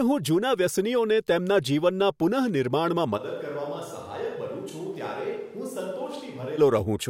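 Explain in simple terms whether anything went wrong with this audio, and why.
Right after "તેમના જીવનના પુનઃનિર્માણમાં", at about 3.19 seconds, the speech suddenly turns hollow and roomy, as if heard from across the room. It drops noticeably in volume, loses its warmth in the low end, and faint background noise comes up around it. At 6.57 seconds the close, full sound snaps back. This is a switch to a distant microphone: the close microphone's signal likely dropped out, leaving only a farther one, such as a camera's, to pick up the sound.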